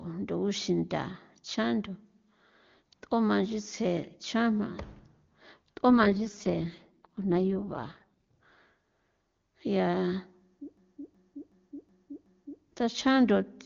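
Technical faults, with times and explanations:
5.90–8.33 s, AMR rate drop: the link forced the AMR-WB codec down from its full rate, which fits a fall to 6.6 kbit/s, spending bits on error protection instead of detail. The speech keeps the same wideband range and stays unbroken but turns rough and synthetic, then clears.
10.77–12.63 s, system hang loop: the system froze while the sound hardware kept replaying its ring buffer, which fits a 16384-sample buffer. One 0.37 s slice repeats five times at about 2.7 Hz, a machine-gun stutter, with almost no audio lost.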